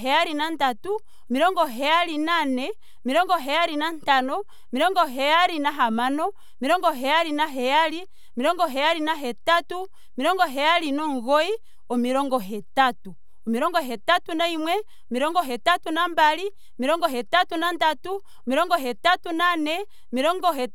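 Speech runs through the whole clip on a waveform pushed off the zero line by a constant amount, a DC offset. It cannot be heard as such, but it eats headroom on one side and shows on a spectrogram as a steady band at 0 Hz.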